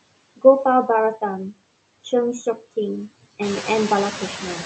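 Speech with noise suppressor artifacts throughout. The suppressor pulls steady background down by about 20 dB, so the residue swells under the talking and sinks between phrases. The room noise climbs by about 10 dB at around three and a half seconds.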